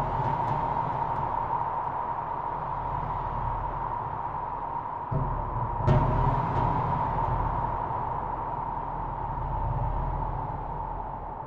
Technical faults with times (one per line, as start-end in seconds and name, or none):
none